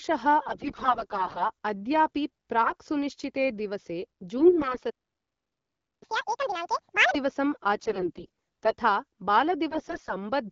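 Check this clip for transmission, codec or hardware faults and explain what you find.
Three kinds of fault show up in the speech, all from the delivery path rather than the wideband AMR coding itself, which sounds clean where the link holds.

AMR bit errors hit at 0.45–1.50 s, 2.62–2.74 s, 4.38–4.78 s, 7.76–8.75 s and 9.70–10.15 s. Fairly heavy bit flips in the weakly protected frame bits throw off the pulses and fine parameters, so the voice turns scratchy and gargly while keeping its pitch and level.

A playback stall runs from 4.90 to 6.03 s, about 1.1 s of dead silence mid-flow, most likely the player running dry of data.

Catch-up at higher speed follows from 6.03 to 7.15 s. The backlog plays back at 2x through resampling, so the voice jumps up sharply, close to an octave.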